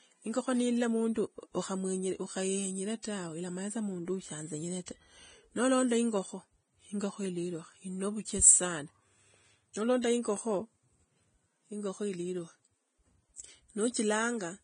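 Right from the start, the whole speech clip carries heavy Vorbis compression damage, or at least that's the likely cause. Nothing comes through above about 9.7 kHz, and the treble that's left sounds hissy and grainy, because the fine detail up there has been quantised so coarsely that it turns into noise of roughly the same energy. Consonants lose their edges, and the overall damage fits a low bitrate somewhere around 20 kbps.

At 9.74 s there's a pre-echo, a quick smear of hiss about 19 ms long just before a sharp onset. The codec spreads its quantisation noise across the whole transform block, so noise sized for the loud attack leaks into the quiet moment before it. It happens again from 10.02 to 10.04 s, this time spreading about 21 ms ahead, and in both places the attack sounds softened and blurred.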